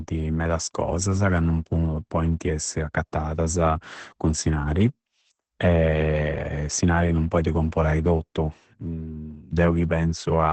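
Opus compression runs through the whole clip, likely in its SILK speech mode. Nothing survives above 8.7 kHz, and the speech comes out muffled, hoarse and heavily damaged, which fits a bitrate near 12 kbps forcing the encoder down to wideband.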